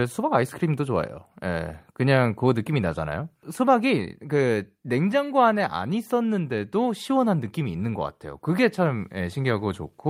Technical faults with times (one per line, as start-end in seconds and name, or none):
none